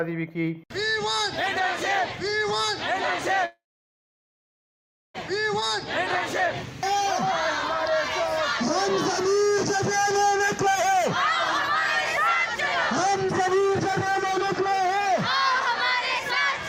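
From 3.45 to 5.16 s the audio stops and is replaced by a short buzzy continuation of the last sound that fades into about 1.55 s of silence. The sound then picks up exactly where it left off, which points to a call audio freeze, likely caused by delayed packets draining the jitter buffer. Unlike a dropout or cut, nothing is lost. The 1.69 s gap is inserted, pushing everything after it later by that amount. A jitter buffer speed-up follows at 10.35 to 11.04 s, running at 128% and removing roughly a fifth of a second, and again at 13.05 to 15.71 s, running at 118% and removing about half a second. Here the receiver snips out many pitch-period-sized pieces to reduce its backlog, so the sound is hurried but keeps its original pitch. That separates it from a sample-rate or playback-speed error, where the pitch would rise along with the tempo.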